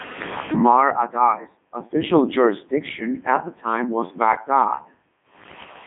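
From start to finish the speech has passed through the Codec 2 vocoder, at its top rate of 3.2 kbit/s. Only pitch, voicing, energy and a coarse spectral envelope survive, and the decoder rebuilds the voice from sine waves, so it sounds robotic and buzzy, with heavy damage throughout. A spectrogram shows neat synthetic harmonics between 200 Hz and 3.6 kHz and nothing above 3.8 kHz. The waveform no longer matches any natural voice shape.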